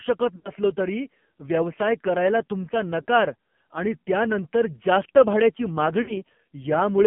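Speech heard through the AMR narrowband mobile codec: band-limited to 150 Hz–3.4 kHz, buzzy and synthetic, pointing to a low rate near 6 kbps rather than plain telephone filtering. Lost AMR speech frames at 0.36–0.51 s, 3.02–3.06 s and 6.02–6.21 s smear the last pitch and fade over 40–80 ms, unlike a clean silent dropout.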